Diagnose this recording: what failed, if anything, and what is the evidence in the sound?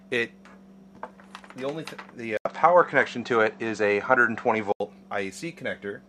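At 2.37 s the capture path likely switched to a poorer input device: an 80 ms silence opens the change, then everything above 8.2 kHz vanishes, the level shifts by around 5 dB, and a new noise floor appears, roughly 45 dB under the signal. At 4.80 s the full band returns. A codec bandwidth drop would keep the original noise and level; here tone, noise and gain all change together, pointing to a different device.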